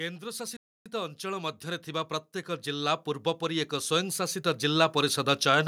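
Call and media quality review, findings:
Automatic gain rising, 0.19 s through to the end: level climbs steadily, speech and background floor swelling together. The AGC judged the input too quiet and keeps ramping its gain. On the waveform the envelope widens progressively; on the spectrogram the noise floor brightens with the speech.

Playback stall, 0.57 to 0.86 s: the audio cuts out for about 290 ms mid-flow, then resumes. Likely cause is the player's buffer running dry or its thread being blocked. The waveform shows a flat, near-silent gap and the spectrogram a clean vertical blank band.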